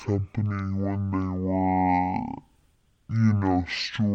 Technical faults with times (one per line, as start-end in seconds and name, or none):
0.00-4.15 stereo read as mono